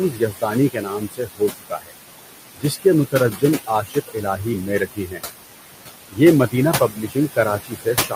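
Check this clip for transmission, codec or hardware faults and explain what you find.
The trouble here is all on the processing side: a noise suppressor working too hard. Room noise sits only about 9 dB under the speech, and the suppressor goes after it aggressively.

Noise suppressor artifacts run through the whole clip. The suppressor pulls what it judges to be steady noise down by about 17 dB, band by band, every frame. The background dips in the gaps and comes back under the speech.

Speech cut by the noise suppressor shows up three times. From 0.10 to 1.92 s, parts of the speech drop by up to about 19 dB, roughly a second in total. From 2.54 to 5.23 s, about 18 dB comes off for around 0.7 s. From 6.11 s to the end, there is a dip of about 16 dB. In each case the suppressor mistook soft speech for noise, so quiet consonants and word endings get swallowed and sound faint.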